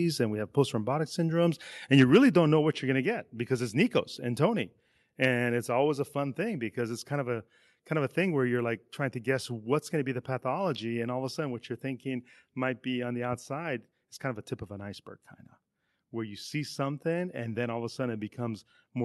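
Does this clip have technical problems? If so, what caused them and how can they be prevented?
Yes. From 1.98 to 2.17 s, just before "don't know what you're", the loudest syllables take on a harsh, crackling edge. This is microphone overload, likely from input gain set so high that peaks ran about 3 dB past the converter's limit, flattening the tops of roughly 2% of the samples. Lowering the microphone's input level so peaks keep some headroom prevents this.

The level then drops abruptly twice, each time by about 3 dB: at 2.04 s, in the middle of that distorted burst, and at 3.06 s, between "what you're going to" and "get because it's". This is the microphone volume stepped down, likely the call software reacting to the clipping by cutting the device's input volume in a single jump. Setting a moderate fixed input level and disabling automatic microphone adjustment prevents these sudden steps.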